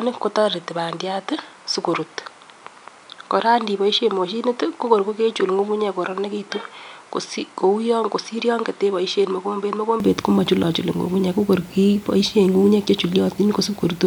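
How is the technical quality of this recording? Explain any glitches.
The recording has one fault. From 0.0 to 10.0 s the sound is duller and quieter. Nothing is present above 10.1 kHz, and the level sits around 5 dB lower, with faint added noise well below it. At 10.0 s it clears at once, with no gap. This likely comes from the input switched to a poorer device, which passed a narrower band.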